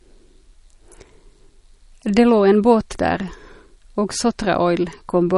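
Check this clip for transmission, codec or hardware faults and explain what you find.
One fault runs throughout: likely MP3 compression. The speech stops dead at 11.1 kHz and sounds plainly watery and swirly, which fits a low bitrate near 40 kbps. Starved of bits, the encoder drops the treble and switches weak frequency lines on and off. On a spectrogram this shows as a flat ceiling at 11.1 kHz with flickering gaps beneath it.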